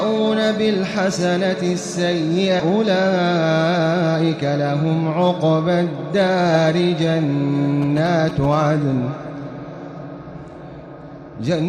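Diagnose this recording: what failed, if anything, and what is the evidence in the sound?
Network and jitter buffer: a skip ahead at 2.59 s drops roughly 0.4 s and joins both sides directly. Unlike a dropout, there is no silent gap or concealment fill.

Jitter buffer: a speed-up from 2.69 to 4.59 s runs about 9% fast at unchanged pitch, trimming roughly a fifth of a second. Tape-style speed errors would shift pitch.

Analogue wiring: GSM signalling bursts from 7.82 to 8.55 s produce galloping ticks and 217 Hz buzzing about 10 dB below the signal. The rectified radio bursts distinguish this from steady mains hum.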